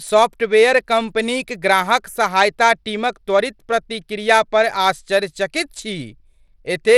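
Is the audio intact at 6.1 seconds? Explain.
No. At 6.1 seconds the speech has a gritty, grainy edge, and its treble flickers and stops dead at 15.8 kHz, as it does through the whole clip. This points to a likely Bluetooth SBC compression at a low bitrate near 96 kbps, starving the upper sub-bands and coarsely quantising the rest.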